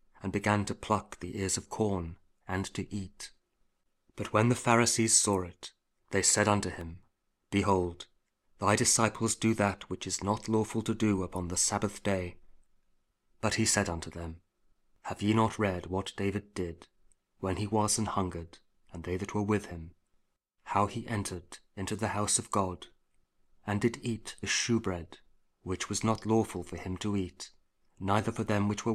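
From 6.38 to 7.46 s, six regular ticks, each under a millisecond, repeat about five times a second: CD scratch ticks, where a blemish defeats error correction on each disc revolution.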